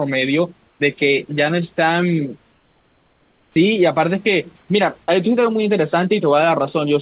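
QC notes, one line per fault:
0.68–0.80 s, 2.52–3.56 s, 4.56–4.68 s: comfort noise in place of the background. The room's background turns smooth and featureless, about 4, 5 and 1 dB quieter, rather than dropping to silence as a gate would. This is likely discontinuous transmission, with synthetic noise filling the pauses.
3.54–3.56 s: onset clipped by the voice detector. Sound resumes abruptly, missing its first 20 ms and soft start, likely from a slow detector. Unlike a dropout, nothing breaks mid-sound.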